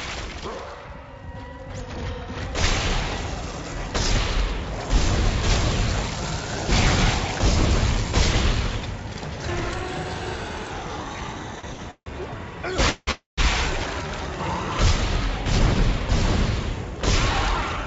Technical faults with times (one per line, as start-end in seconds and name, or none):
11.60-11.81 short stall from a late packet
11.91-12.08 call audio freeze
12.89-13.39 call audio freeze
16.70-17.84 jitter buffer speed-up